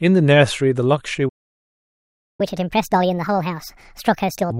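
At 1.28 s the speech cuts off mid-flow and the output goes silent for about 1.1 s, until 2.41 s. This playback stall was likely caused by the player running short of data or having its thread blocked. On a waveform it appears as a flat line, and on a spectrogram as a blank vertical band.

From 2.41 s to 4.50 s the player is in catch-up at higher speed, resampling its backlog at 1.5 times normal rate. The speech sounds hurried and raised by roughly seven semitones. Formant and harmonic bands sit visibly higher on the spectrogram, and waveform cycles are compressed.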